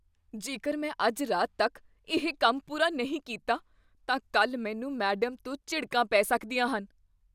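No technical faults can be heard anywhere in the recording, and the signal holds steady from its first moment to its last.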